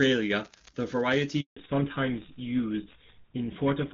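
A handover gap runs from 1.41 to 1.57 s, a silence of 160 ms. While the call was passed from one network to another, no speech frames reached the receiver, so the speech fades out within a few tens of milliseconds and stays silent until the new link begins delivering audio. Whatever was said in that window is simply missing, leaving a clean hole in the speech.

A fallback to narrowband follows straight after, from 1.57 s to the end. Before the gap the speech carries the fuller, clearer top end of the AMR wideband (HD Voice) codec, whose sound fits a high bitrate such as 23.85 kbit/s. After the switch, nothing survives above 4 kHz, which points to an older codec like GSM full rate. The speech turns muffled and duller, with a rougher texture.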